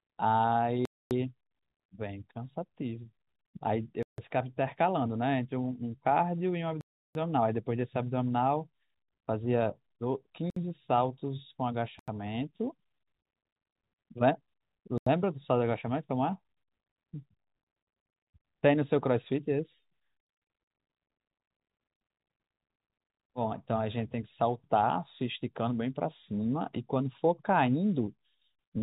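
Six blocks of digital silence, where the output buffer went unfilled and was zeroed, cut the speech at 0.85–1.11 s (256 ms), 4.03–4.18 s (about 150 ms), 6.81–7.15 s (341 ms), 10.50–10.56 s (63 ms), 11.99–12.08 s and 14.98–15.07 s (85 ms each), each a hole in the band-limited telephone sound. The 85 ms and 341 ms gaps fit 4096- and 16384-sample buffers at 48 kHz.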